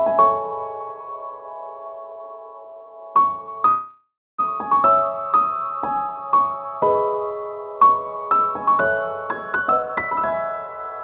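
From 3.68 to 4.40 s there is a call audio freeze, most likely because packets were delayed and the jitter buffer ran dry. The last sound is stretched into a fading buzz that ends in about 270 ms of silence. The audio then resumes where it stopped, so roughly 0.7 s is inserted and nothing is lost.

From 9.56 to 11.00 s a jitter buffer speed-up follows. Too much audio had built up, so the receiver repeatedly cut out short pitch-period slices, about half a second in total. Playback runs at about 140 percent speed with unchanged pitch, which sounds hurried. Across the clip, the band stops at 4 kHz, which fits a G.711 call codec.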